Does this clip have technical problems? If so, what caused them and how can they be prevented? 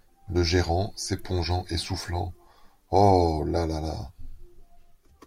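Yes. At 1.19 s there is an electrical switching spike, a sharp snap just before "et soufflant". It lasts only a few milliseconds and peaks at a fairly modest level, around -30 dBFS, so it sits on top of the speech as a brief tick. The likely cause is a nearby switch, motor or static discharge arcing, with the audio line picking up that burst of interference. To prevent it, use balanced, shielded cabling and keep switched appliances and motors away from the recording chain.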